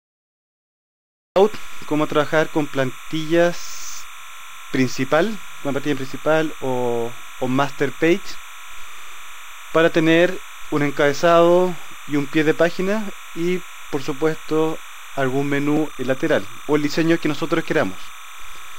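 The first 1.36 s are digital silence. At 1.36 s the sound starts abruptly, already mid-event. This is a cut-off start. Capture began late, so the opening of the sound was never recorded. There is no attack and no fade-in. The level jumps straight from nothing to full signal. The ear hears a sound that is already under way.

Throughout the clip, a thin chirping warble sits behind the sound. This is timecode bleed. Linear timecode from a nearby track or cable has leaked into the audio path. The code is a square wave. It flips between two pitches, around 1 kHz and 2 kHz, as its bits change. Its framing runs at 29.97 frames per second, so the chirp has a fast, steady rhythm. It sits roughly 20 dB below the wanted signal. It never stops.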